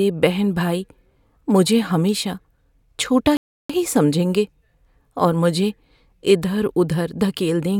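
Speech with a rebuffering stall from 3.37 to 3.70 s: playback starved, went silent, then resumed exactly where it stopped, adding 0.33 s, seen as a flat, blank gap.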